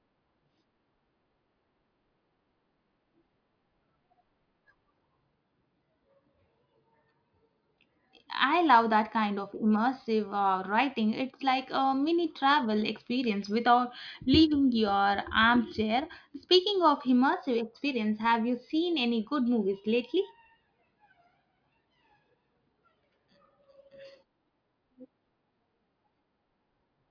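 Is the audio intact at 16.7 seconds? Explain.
Yes, at 16.7 seconds the speech plays through intact, with no audible technical fault at that moment.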